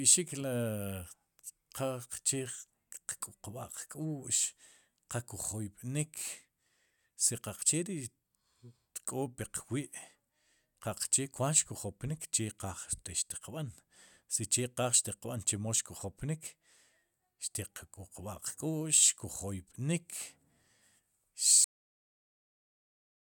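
At 21.64 s the speech ends abruptly in a cut-off end. The sound stops partway through, with no natural fade or decay. The final stretch of audio was never written or played out, so the signal simply halts. From there to the end of the file, about 1.76 s, there is only digital silence. The effect is a sudden break, as though the recording was switched off mid-sound.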